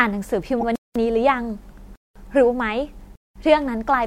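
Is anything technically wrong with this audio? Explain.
Yes, two things. Around 0.60 to 0.64 s there's a corrupt frame decoded: a few damaged compressed frames got played anyway, throwing energy onto wrong frequencies as a brief chirpy burst. Then there's a gap between chunks at 0.76, 1.96 and 3.16 s. Each is a 200 ms silence between 1 s chunks, so the speech keeps stopping dead at every join.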